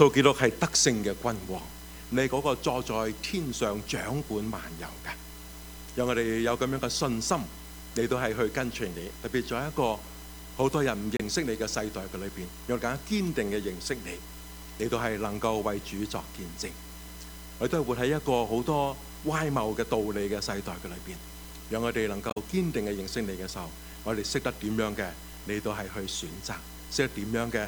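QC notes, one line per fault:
11.17–11.21 s and 22.27–22.37 s, damaged data in a compressed stream: two short glitches, about 44 ms and 100 ms long. Corrupted bytes in the compressed stream make the decoder misread those frames and lose sync. It loses audio until it finds the next valid frame header.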